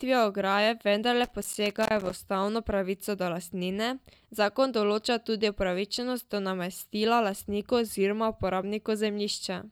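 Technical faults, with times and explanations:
1.24–2.13 s, loose connector crackle: a worn or dirty contact somewhere in the signal chain repeatedly makes and breaks, chopping the speech signal. Between "ograje vendarle" and "ustavno pravico do lastnine" this comes through as an irregular burst of scratchy crackle.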